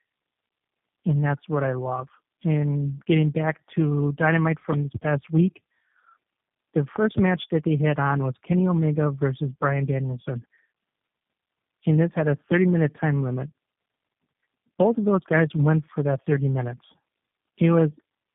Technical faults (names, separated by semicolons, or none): tandem speech coding; loud pop